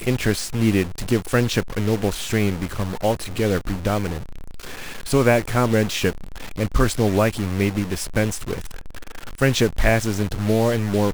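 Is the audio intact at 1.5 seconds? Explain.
No. At 1.5 seconds, as throughout the clip, a data bit has likely stuck in the converter or a data line. Samples needing the other bit value jump by a fixed step of about -30 dBFS, giving harsh, buzzy distortion on the speech and noise filling the pauses.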